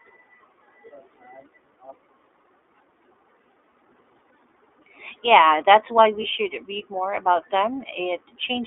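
Throughout, the speech sounds thin, boxy and slightly rough and synthetic, limited to about 300 Hz to 3.6 kHz. This is the iLBC codec, whose 20 ms narrowband frames fit its 15.2 kbps mode.

From 6.22 to 6.26 s, a brief held, buzzy vowel-like sound replaces the speech. These are lost iLBC frames, consistent with one missing packet, and the decoder fills the gap by repeating the last pitch cycle with added noise.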